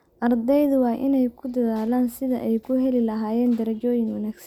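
A short piece of speech with nothing technically wrong anywhere in it, so there's no problem to point to and no cause to explain.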